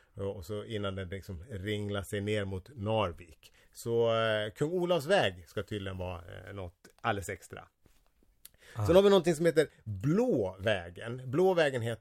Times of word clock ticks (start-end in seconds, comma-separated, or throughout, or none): none